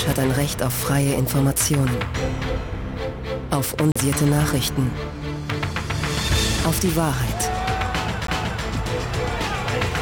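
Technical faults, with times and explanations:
3.92–3.96 s and 8.27 s, CD skip: each time the sound is cut by a brief tick-like mute, about 40 ms at first and a much shorter one later, and then resumes from a different position instead of where it left off, because the laser has jumped to another turn of the disc's spiral. That displacement sets it apart from a plain dropout, where the mute leaves the timeline intact and nothing goes missing or repeats.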